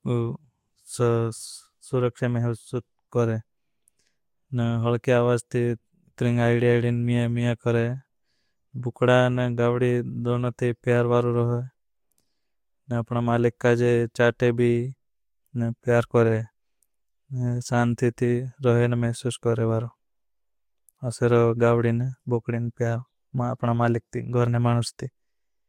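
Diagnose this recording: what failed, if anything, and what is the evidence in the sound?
Nothing in this speech recording points to a failure anywhere along the chain, so there's no fault to diagnose here.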